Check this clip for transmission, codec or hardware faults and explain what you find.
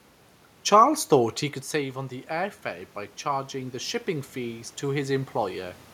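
Two kinds of fault are present: dropped samples, heard as two clicks, and automatic gain rising across most of the speech clip.

Dropped samples, at 1.55 s just after "thought he" and again at 2.81 s: a fraction of a millisecond of the stream was likely lost, so the waveform steps abruptly to a later value. Nothing audible is removed; each gap sounds like a single sharp click.

Automatic gain rising, from 1.71 s to 5.82 s: after the talker moved away at about 1.5 s and the input fell by about 9 dB, the gain control slowly added about 7 dB. Voice and room noise swell back up together over roughly four seconds.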